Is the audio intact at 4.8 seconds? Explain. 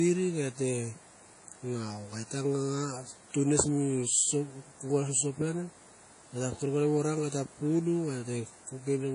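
No. At 4.8 seconds, as throughout, the speech rings and washes with signal-following hiss and nothing above 10.1 kHz, likely WMA compression at a low bitrate near 32 kbps, not a plain low-pass filter.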